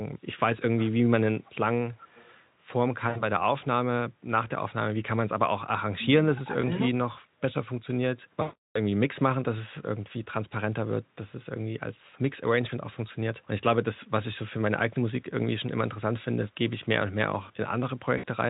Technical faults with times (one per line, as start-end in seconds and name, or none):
1.39-1.53 echo leak
1.94-2.35 echo leak
3.09-3.24 VoIP packet loss concealed by the speech codec
6.37-6.85 speech suppressed in double talk
6.61-6.65 VoIP packet loss concealed by the speech codec
8.41-8.78 VoIP packet loss concealed by the speech codec
18.17-18.26 VoIP packet loss concealed by the speech codec